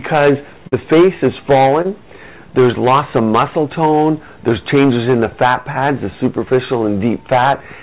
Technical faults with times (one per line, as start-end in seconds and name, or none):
0.68-0.74 short concealed packet loss
1.82-1.86 short concealed packet loss